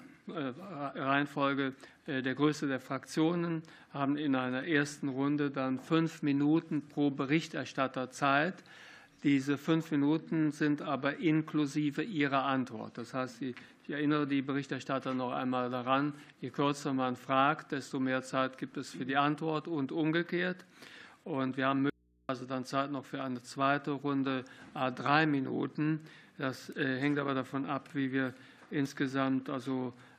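An audio dropout to a faint residue from 21.90 to 22.29 s cuts the sound abruptly to mains hum about 40 dB down, unlike a pause, likely from a signal break.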